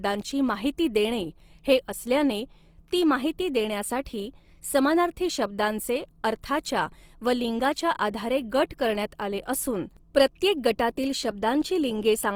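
Right through the speech there's a grainy, rough texture, and tones sound noisy rather than clean. That's likely Opus compression in its music mode at a low rate, something like 24 kbps, filling starved bands with noise instead of dropping them. Bandwidth still runs to about 20.4 kHz.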